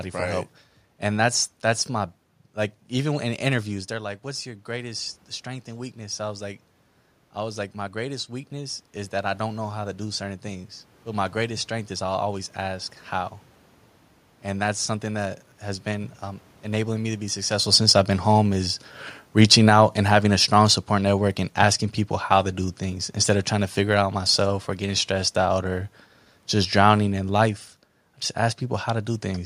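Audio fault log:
3.67 to 12.95 s, automatic gain rising: Right after the talker shifts away from the mic around 3.5 s, the level drops by about 11 dB. The AGC reads that as a quiet input and slowly winds its gain back up by about 9 dB across those nine-odd seconds. You hear the voice creep back up, and the room noise swells right along with it, because the gain lifts everything, not just the talker.
17.62 to 21.82 s, automatic gain falling: Around 17.5 s the talker moves. The AGC decides the input is too hot and eases its gain down by about 4 dB over roughly four seconds. So the passage starts out loud and then gradually sinks, and the room noise sinks with it, since the gain change applies to the whole signal rather than to the voice alone.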